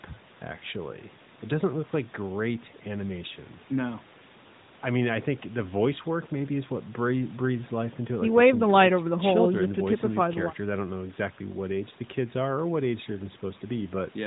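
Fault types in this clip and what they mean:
Nothing to list here, as there's no fault to be heard anywhere in this clip.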